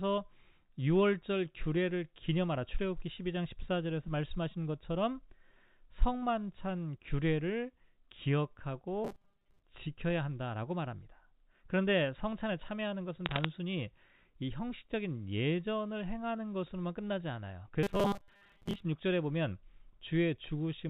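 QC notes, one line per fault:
9.0–9.6 s and 17.8–18.8 s, robotic sound from repeated short buffers: a rigid metallic buzz at 200 Hz, likely from a 5 ms buffer being replayed while about half, then most, of the real audio is skipped. The fixed pitch sets it apart from crackle.
13.26–13.45 s, bit errors on a digital phone line: a brief burst of sharp ticks from flipped bits in the G.711 stream, at an error rate of a fraction of a percent. The ticks sit on top of unchanged speech, with no buzz or pitch change.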